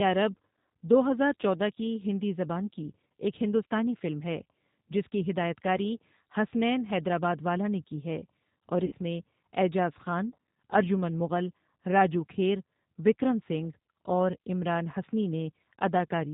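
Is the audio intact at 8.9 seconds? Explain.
No. Between 8.86 and 8.93 s the speech is disrupted by VoIP packet loss concealed by the speech codec. About 60 ms of audio went missing, which fits two lost packets. The decoder filled the gap by carrying forward its last pitch and filter settings at falling gain. The result is a short, fading smear rather than silence. That tail sets it apart from a plain dropout, which would cut cleanly to nothing and resume at full strength.

The same moment also carries the G.729 codec, audible across the whole clip. Its damage here is plainly audible. The codec (the G.729A variant, consistent with 8 kbit/s) resynthesises speech from a vocal tract model, a pitch predictor and a few pulses per subframe. Nothing above 4 kHz survives, and the voice takes on a rough, slightly synthetic grain. That grain distinguishes it from simple band-limiting, which dulls the top end but leaves the remaining sound natural.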